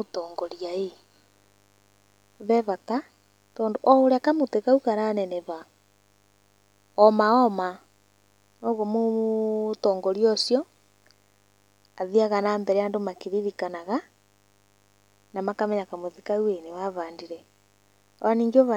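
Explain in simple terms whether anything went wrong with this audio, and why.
A faint, raspy buzz runs under the speech from start to finish. This is mains buzz, electrical interference from the 50 Hz power supply leaking into the recording.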